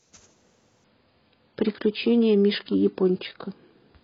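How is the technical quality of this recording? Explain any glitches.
The recording starts clean but loses quality early on and never recovers. At 0.84 s the speech switches, with no gap, to an adaptive stream at a lower bitrate, and it stays that way to the end at 4.03 s. The player changed down to a cheaper encoding, likely because the connection slowed. Nothing is left above 5.1 kHz, so consonants turn dull. Codec artefacts become audible, with a swirly, synthetic edge. The sudden change suggests a drop from a high-rate stream to one of roughly 16 kbit/s.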